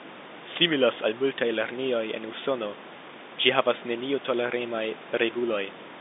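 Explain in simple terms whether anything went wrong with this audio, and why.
Nothing went wrong that I could hear: listening carefully, no fault stood out anywhere in the recording.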